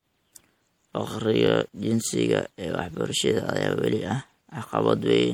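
Throughout the speech there is a watery, swirling quality with smeared consonant attacks and clearly audible damage, likely from MP3 compression at a low bitrate around 64 kbps. On a spectrogram, energy stops at 20.5 kHz and weak regions flicker on and off between frames.

At 1.47 to 1.49 s, and again at 3.71 to 3.73 s just before "weli ah", a repeated buffer occurs. Audio arrived late, so a 21 ms block, which fits a 1024-sample buffer, played twice. Each is heard as a short stutter. A waveform shows an identical segment repeated with a hard discontinuity at the join.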